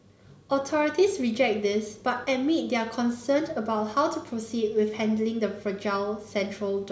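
No faults can be heard anywhere in the recording.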